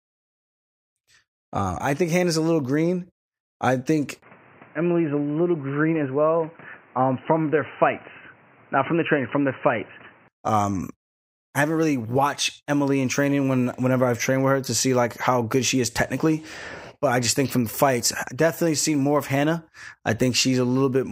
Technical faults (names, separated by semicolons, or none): input switched to a poorer device